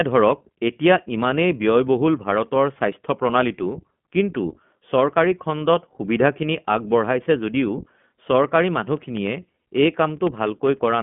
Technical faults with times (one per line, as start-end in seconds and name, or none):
0.00-11.02 iLBC codec